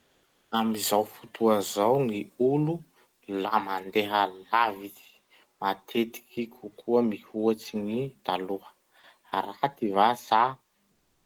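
Comfort noise in place of the background occupies the opening 0.51 s and the final 0.35 s, from 10.91 s to the end. During these speech-free stretches the real room sound gives way to a smooth, featureless hiss, about 4 dB quieter at the start and about 12 dB quieter at the close. The likely cause is discontinuous transmission, such as Opus DTX: the sender pauses when no speech is detected, and the receiver synthesises noise shaped roughly like the background.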